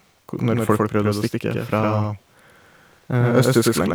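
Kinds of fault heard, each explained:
Doubled audio track: throughout the speech a second, full-band copy trails about a tenth of a second behind at roughly equal loudness, likely from a second capture path or misaligned edit; unlike room echo or reverb, it has no decay and no added room colour.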